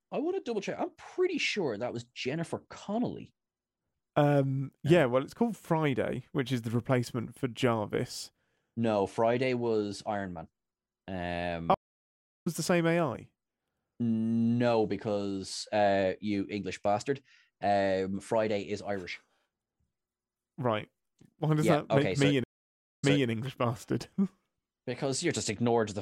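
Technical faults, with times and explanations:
11.74–12.47 s, stream reconnect: the sound cuts to silence for 0.69 s, then picks up at "the same" about half a second further on than where it stopped, so a short stretch is skipped. The connection dropped, the player reconnected and started a new decoder mid-stream at the live position, and its first frame fades in.
22.44–23.29 s, stream reconnect: a 0.57 s silence, then the audio resumes 0.29 s earlier than the break point and repeats a short stretch. Here the server resent a burst of recent audio after reconnecting, and the fresh decoder again brings the first frame in softly.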